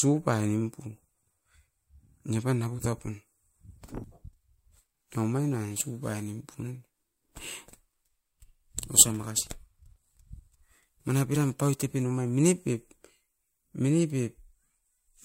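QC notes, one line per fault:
4.03–12.03 s, crude rate conversion: the speech takes on a gritty, inharmonic fizz, strongest on loud and sibilant passages. The pattern fits a 44.1 kHz to 48 kHz change done by repeating nearest samples with no interpolation or anti-imaging filter. The periodic sample repeats create a regular timing error that folds into shifted, inharmonic copies of the speech, sitting only around 15 dB below the signal.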